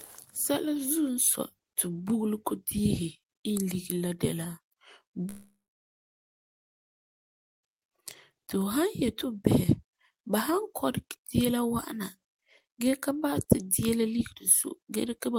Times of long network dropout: 5.29-7.66

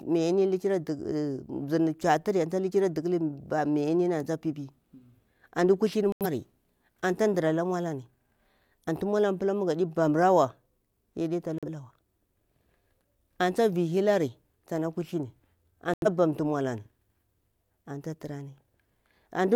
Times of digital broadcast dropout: 6.12-6.26, 11.58-11.67, 15.94-16.07

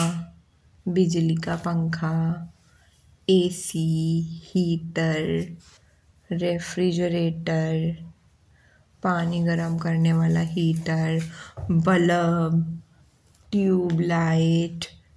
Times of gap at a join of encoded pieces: none

